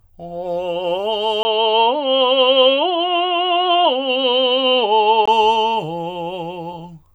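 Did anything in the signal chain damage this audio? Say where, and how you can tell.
Yes, at the input stage. From 1.43 to 5.28 s the music goes dull above 4.4 kHz, after a 20 ms gap, with faint new hiss. That's likely the input switched to a poorer device.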